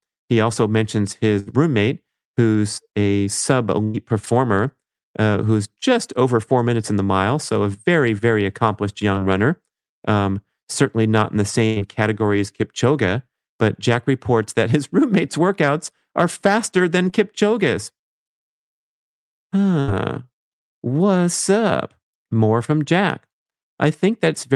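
Speech with two kinds of network dropout. Bursts of packet loss hit at 1.39–1.53 s after "also mentions", 3.84–3.96 s, 11.66–11.78 s between "certainly not in the" and "category as", and 19.80–19.89 s. Each time the receiver extends the last sound into a fading buzz or hiss, and 60 to 100 ms of audio is skipped. Short concealed packet loss at 9.14–9.18 s after "a very very accomplished" and at 17.10–17.14 s drops about 20 ms each, leaving a brief smear where the decoder patches over it.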